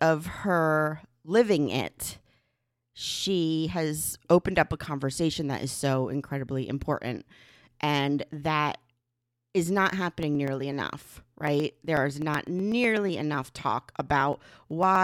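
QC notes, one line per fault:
10.10–14.95 s, periodic USB or driver dropouts: a regular tick runs through the speech every 0.124 s, around forty in all. Each time, a sliver of audio of roughly half a millisecond is skipped outright rather than filled with silence, so the waveform jumps and clicks. The strict, unchanging spacing and the ticks sounding only while the speech has signal set this apart from random packet loss or the irregular crackle of a loose cable.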